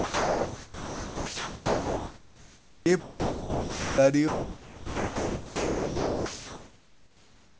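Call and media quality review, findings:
Speech replaced by steady comfort noise at 0.00–2.86 s, 3.00–3.98 s and 4.28–7.60 s. Likely sound dropped by the voice detector, muting quiet speech as background. Band stops at 8 kHz, consistent with G.722.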